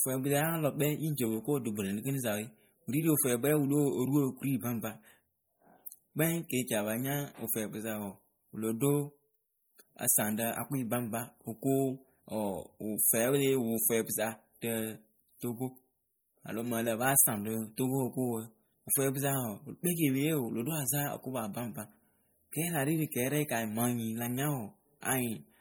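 Throughout the speech, the signal has likely been squeezed through MP3 compression at a starved bitrate, which fits about 48 kbps. The encoder trims the treble and lets weak frequency detail flicker on and off between frames, leaving a plainly audible watery, swirling texture.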